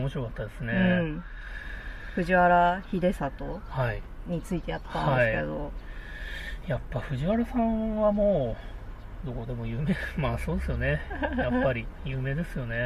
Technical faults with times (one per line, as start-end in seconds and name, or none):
none